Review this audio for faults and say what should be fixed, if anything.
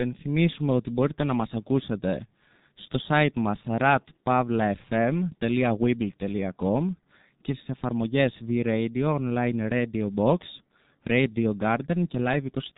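G.723.1 codec damage runs through the whole speech recording: nothing above 3.8 kHz survives, and the coder's slowly updated model of the voice over long frames leaves it muffled and hoarse, with smeared consonants, which fits its 6.3 kbit/s mode. Prevent it by capturing and sending the audio with a wideband codec at a higher bitrate rather than this legacy telephony coder.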